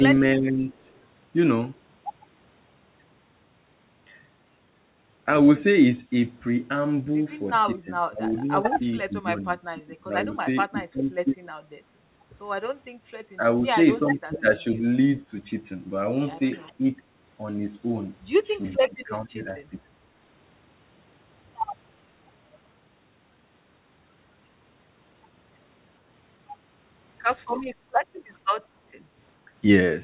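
From 0.36 to 0.65 s the speech dips by about 10 dB. This is likely speech suppressed in double talk, with the canceller ducking the talker.

At 0.8 to 1.0 s a faint delayed copy of the speech appears, about 0.45 s late and about 40 dB down. This is likely an echo leak from loudspeaker sound the canceller missed.

The same suppression returns at 7.84 to 11.36 s, 13.37 to 13.41 s, 14.17 to 14.82 s, 16.78 to 16.83 s and 18.79 to 19.94 s. The speech drops by up to about 20 dB in pieces.

At 27.75 to 27.92 s the room sound drops by about 7 dB. This is background gated by the echo canceller, and it returns when the canceller lets go.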